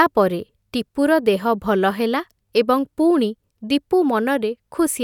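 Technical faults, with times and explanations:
Nothing in this speech recording stands out as a technical problem, so there's nothing to flag here.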